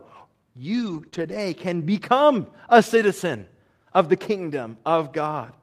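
Lost packets rebuilt from error correction, 0.73 to 1.07 s: several separate packets went missing, but each following packet carried a low-bitrate copy of the one before, so the decoder played those copies rather than leaving a hole. The result is about 180 ms of continuous but coarser, noisier speech, a stretch that sounds grainy rather than interrupted, which fits several separate packets lost.

Short concealed packet loss, 1.09 to 1.14 s: here about 20 ms of audio arrived too late and had no backup copy, so the receiver extrapolated from the last sound it had, carrying on its pitch or shaped noise, then cross-faded into the real signal. The patch covers about 23 ms and comes across as a quick smear or wobble.

Lost packets rebuilt from error correction again, 1.14 to 1.40 s, just before "can become a citizen": the same redundancy recovery fills about 140 ms with the rougher, noisier low-bitrate copies, following directly on the concealed gap.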